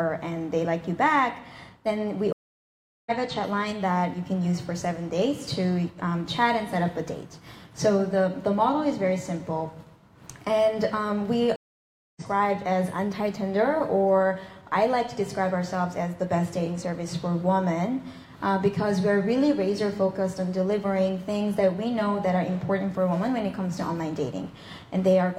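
At 2.33 s and again at 11.56 s, stream reconnects cut the sound for 0.74 s and 0.60 s. Each time it fades back in about 0.7 s further on, skipping material rather than resuming where it stopped.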